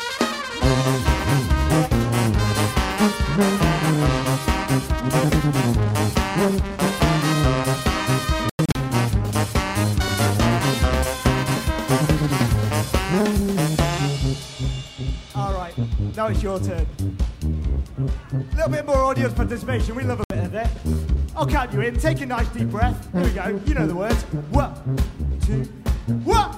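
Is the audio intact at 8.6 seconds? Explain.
No. At 8.6 seconds the sound falls inside a digital broadcast dropout running from 8.50 to 8.76 s. The receiver stopped getting valid frames, so it muted until clean ones arrived again. The result is a cluster of short silent holes, about 160 ms of lost audio spread over roughly 256 ms. The longest gap lasts 96 ms. The pattern suggests a handful of failed frames. Whatever was broadcast in those gaps is gone.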